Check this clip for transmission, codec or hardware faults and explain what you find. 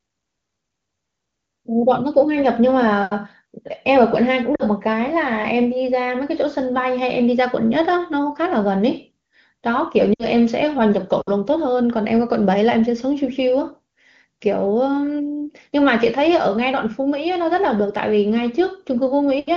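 Two transmission faults, both lost AMR speech frames, in this wideband AMR-WB call at 23.85 kbit/s. Lost AMR speech frames occur at 4.55–4.63 s and 10.13–10.25 s, gaps of about 40 ms and 60 ms that fit two and three 20 ms frames. Radio errors corrupted these frames so they failed their checksum, and the decoder filled in by repeating the last good pitch and vocal tract settings at falling gain. Each gap drops to near silence within two frames, and the speech resumes briefly weak or rough.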